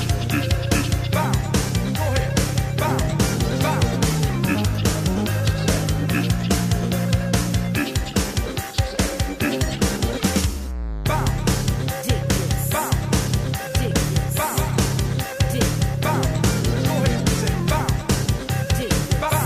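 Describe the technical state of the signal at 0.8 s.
At 0.8 s the signal is intact, with no audible dropout, distortion or other fault.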